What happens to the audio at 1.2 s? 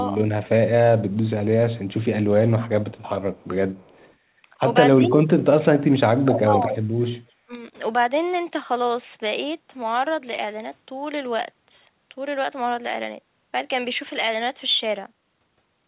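Between 1.11 and 1.3 s there is a brief echo leak: a faint, delayed copy of the speech trailing the original by about 260 ms, sitting roughly 35 dB below it. The likely cause is a far-end loudspeaker feeding its microphone with an echo canceller that let a scrap through. Like the rest of the call audio, it stays within the telephone band below 4 kHz.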